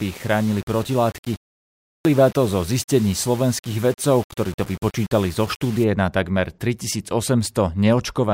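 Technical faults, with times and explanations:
0.00–5.84 s, low bit depth without dither. The speech sounds grainy and gritty up to "na takmer". The distortion moves with the voice. The error sits roughly 20 dB below the signal, likely from undithered rounding to about 6 bits.
1.88–2.05 s, clipped start after a pause. After a silence of about 0.52 s, speech resumes abruptly with its onset missing. About 170 ms is swallowed. The output device appears to doze in the gap and wakes too late for the first sounds.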